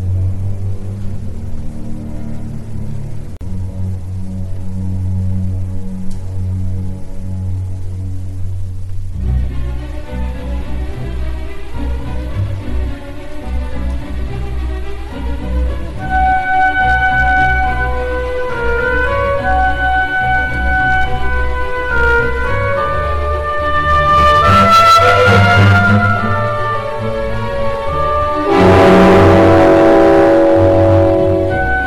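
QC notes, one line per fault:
3.37–3.41 s, gap at a join of encoded pieces: the sound drops out for about 43 ms and then resumes exactly where it stopped, with nothing missing. The edges are smeared by the codec. This fits two separately encoded segments joined without trimming, so the encoder's start-up delay and the padding on the previous segment's last frame remain as a short hole in otherwise continuous audio.
16.15–17.63 s, 18.68–21.27 s, 21.94–22.58 s, 23.75–26.32 s and 28.52–31.62 s, hard clipping: the peaks are cut flat because the signal exceeds what a stage in the chain can pass. The overdrive grows from about 3 dB, 4 dB and 5 dB to about 11 dB and then about 15 dB. The early runs give crackle on peaks. The later ones turn every loud passage into harsh fuzz, because the flat tops add strong high harmonics.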